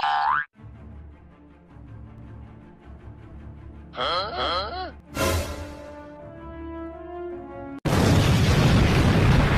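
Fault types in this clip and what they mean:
Doubled audio track: from 2.18 to 5.00 s the sound is heard twice, a second full-band copy trailing about 0.4 s behind at roughly equal loudness, with no decay or room colour, starting and stopping abruptly; likely a second, slower capture path mixed in.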